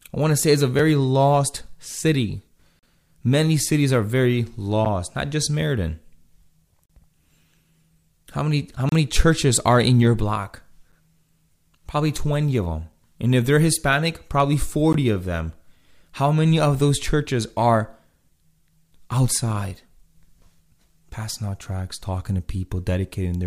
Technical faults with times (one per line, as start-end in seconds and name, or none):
0.79 gap between stream segments
2.79-2.83 gap between stream segments
4.85 gap between stream segments
6.86-6.89 gap between stream segments
8.89-8.92 gap between stream segments
10.92 gap between stream segments
14.93 gap between stream segments